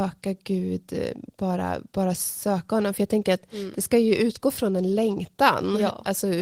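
Speech recording, no technical faults heard anywhere in the clip.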